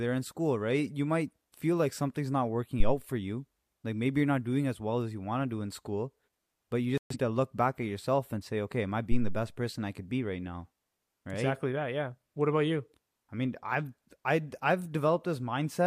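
A deep, low thump lands at 2.80 s, between "feel like something's not" and "for you", and dies away by 2.95 s with a decay of about 34 ms. This is a phantom power thump: a supply switched on or off while the input was live, sending a sudden voltage step through the coupling capacitors. The same kind of thump returns at 9.12 s, after "say okay am I", with a slower decay of about 80 ms, and it has cleared by 9.47 s before "person I could be".

Between them, at 6.98 s, the speech abruptly falls silent right after "in school but you" and picks up again at 7.16 s with "to look back at". This is a digital broadcast dropout. The receiver muted when it stopped getting valid frames, and about 128 ms of programme was never delivered, which fits a loss of around three frames. Whatever was spoken in that gap is gone, not just masked.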